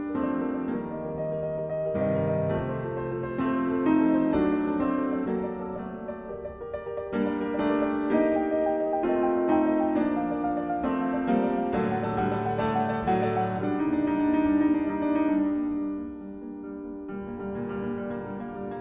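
Nothing in the audio stood out as a technical problem on listening.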